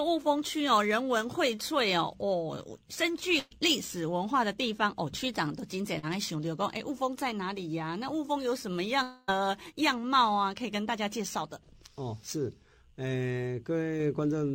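Brief smears at 1.55–1.59 s and 5.99–6.05 s are short concealed packet loss: 20 ms and 40 ms never arrived, and the receiver stretched the preceding sound over each gap. From 3.39 to 3.53 s the sound turns into a held, fading tail, a burst of packet loss in which 120 ms was missing and the last sound was continued and turned down before the audio resumes further on. Between 9.03 and 9.33 s the sound again smears into a fading continuation for about a quarter of a second and comes back past a missing 260 ms stretch, likely a long network dropout.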